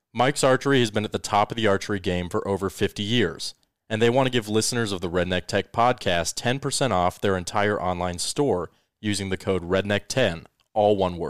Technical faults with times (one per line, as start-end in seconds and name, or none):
none